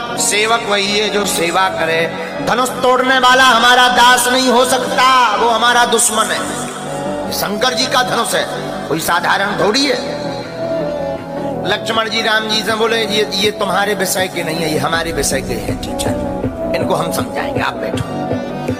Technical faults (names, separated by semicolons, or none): none